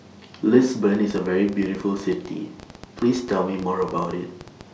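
From 0.95 s to 4.62 s, a ticking runs over the speech, carrying on through the pauses as well: some forty sharp pops of much the same shape, arriving about 10 times a second but at an uneven pace, with the loudest standing a few decibels above the speech itself. This is a train of clicks, likely caused by interference from nearby equipment or a faulty connection or power supply injecting a repeated pulse into the signal.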